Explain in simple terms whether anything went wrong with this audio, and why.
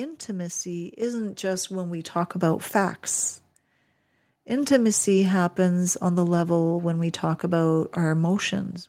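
At 1.02 s and again at 2.04 s, the microphone volume stepped up. The call software raised the input level twice, so speech and background suddenly got louder together.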